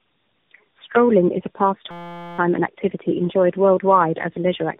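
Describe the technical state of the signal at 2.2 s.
At 2.2 s the sound is caught in a system hang loop, running from 1.91 to 2.39 s. One 5.8 ms slice repeats exactly, which fits a 256-sample buffer, producing a steady buzz at 172 Hz. Little or no audio seems to be lost around it.

Tandem speech coding underlies this moment too. The speech sounds rough, muffled and warbly, as if passed through several speech codecs in turn, with nothing above 3.8 kHz.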